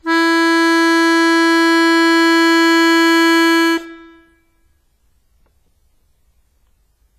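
Music, heavily damaged by what is likely WMA compression throughout. The transform codec smears its quantisation noise over tens of milliseconds, so attacks ring and sustained passages turn washy, with a hiss that swells and recedes alongside the music. The heavy damage points to a bitrate around 24 kbps. On a spectrogram, content stops sharply at 15.5 kHz, with blotchy, time-smeared texture and gaps where faint partials were zeroed.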